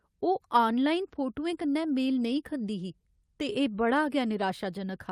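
No technical faults can be heard anywhere in this speech recording.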